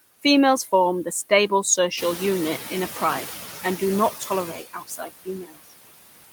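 Right from the start you can hear noise suppressor artifacts: the suppressor is pulling steady-noise bands down by about 20 dB frame by frame, so the background dips between words and swells under them.

At around 2 s the room noise jumps up by about 12 dB, and from 1.97 to 3.41 s, between "form the stable" and "and do not", you get the noise suppressor catching up. Its noise estimate lags, so the louder noise comes through with only about 8 dB of reduction before sinking as the estimate adapts over roughly 1.4 s.

Then from 4.53 to 5.73 s, right after "and do not", there's speech cut by the noise suppressor. It mistakes parts of the voice for noise and ducks them by as much as about 22 dB, so for around 0.7 s in total, parts of the speech sound swallowed and faint.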